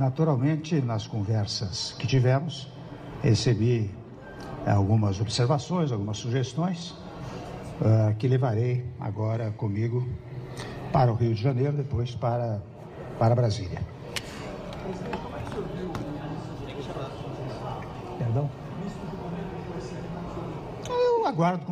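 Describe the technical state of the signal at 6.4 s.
At 6.4 s the signal is intact, with no audible fault at that point.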